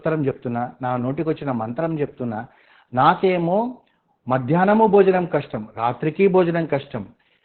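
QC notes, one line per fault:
Throughout: Opus voice compression, SILK, narrowband; speech is cut off above 4 kHz and coarsely coded, so it sounds muffled, hoarse and faintly robotic, fitting about 8 kbps.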